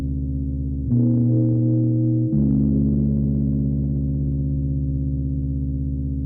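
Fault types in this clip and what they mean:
No faults are present.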